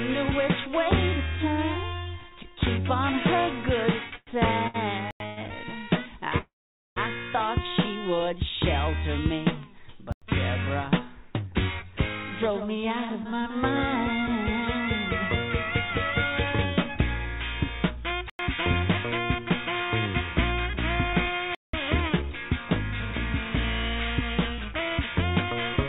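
The audio has come through a narrowband call path, with nothing above 4 kHz on the spectrogram, and it carries several playback faults. From 4.16 to 5.39 s there are repeated stalls (stutter): three short pauses, the longest 108 ms, where packets arrived late and the receiver stretched the last sound. On a spectrogram these show as smeared, repeated frames that fade in the longer waits. Blocks of digital silence cut in at 5.11–5.20 s, 10.12–10.22 s and 18.30–18.39 s, each about 93 ms, and at 21.55–21.73 s, about 186 ms. They are flat silent stretches in the waveform with hard edges, which fits output blocks of 4096 and 8192 samples not being filled in time. At 6.38–6.98 s a call audio freeze holds the sound as a fading buzz, then about 470 ms of silence, before it resumes where it stopped. This is likely a delay of packets in transit. It appears as a decaying smear and then an empty band. 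Jitter buffer speed-up runs from 11.82 to 14.59 s at 104% speed and from 20.69 s to the end at 106%, trimming about a tenth and about three tenths of a second. The waveform shows no visible gaps in the first span, and the pacing of the second span sounds hurried at unchanged pitch.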